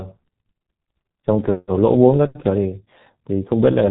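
From start to finish the speech carries heavy G.723.1 codec damage. Nothing gets through above about 3.8 kHz, so it's muffled, and the slow 30 ms frame updates leave it hoarse with smeared consonants, which fits a very low bitrate around 6 kbit/s.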